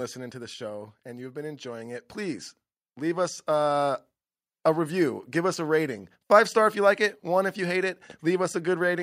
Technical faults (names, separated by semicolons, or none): automatic gain falling; automatic gain rising